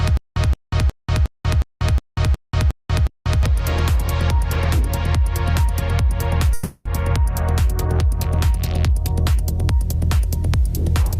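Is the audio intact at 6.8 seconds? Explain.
No. A call audio freeze spans 6.53 to 6.87 s. The last sound stretches into a fading buzz, likely because late packets drained the jitter buffer.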